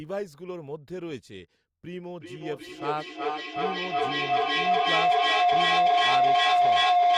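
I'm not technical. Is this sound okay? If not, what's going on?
No. From 2.2 seconds to the end, sound leaks from a loudspeaker back into a microphone and loops louder each trip. The result is a feedback howl, a mid-pitched whine pulsing roughly every 0.4 seconds that grows louder than the speech.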